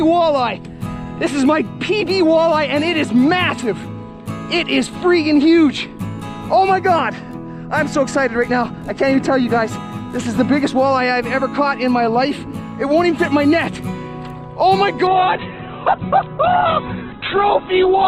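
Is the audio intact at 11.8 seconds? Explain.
Yes, at 11.8 seconds the audio is intact, with no dropout, glitch or other fault at that point.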